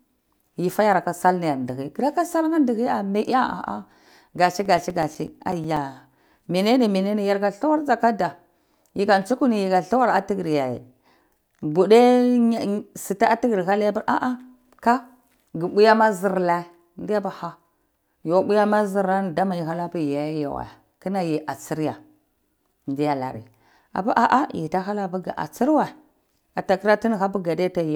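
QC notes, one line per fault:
4.65–6.01 s, CD scratch ticks: a run of 12 ticks at about eight a second, the longest around 7 ms. A scratch is wiping out more data per disc revolution than error correction can rebuild, so the player patches or mutes those samples on each turn.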